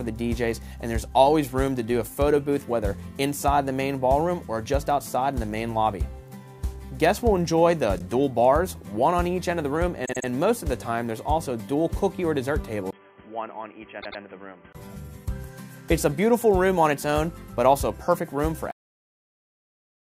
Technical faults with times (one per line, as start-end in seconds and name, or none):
7.98-8.01 repeated frames
10.04-10.26 repeated frames
12.91-14.75 input switched to a poorer device
14.01-14.20 repeated frames
18.71-20.13 cut-off end